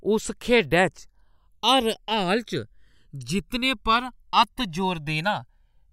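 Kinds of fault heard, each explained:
Channels drifting apart: the left and right channels of this speech were captured on devices running from separate clocks that disagree by a few hundred parts per million, so the delay between them slowly grows, reaching roughly a millisecond and a half by the end. Summed to mono, the two copies form a comb filter whose notches glide steadily through the spectrum, heard throughout the clip as a slow, sweeping flanging on the voice.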